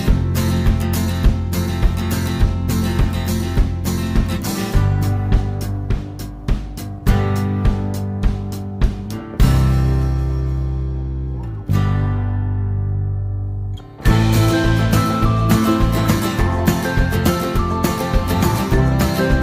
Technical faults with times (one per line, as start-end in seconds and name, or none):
none